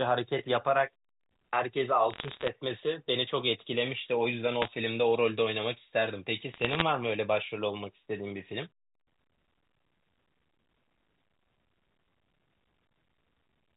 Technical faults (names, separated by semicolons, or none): bit errors on a digital phone line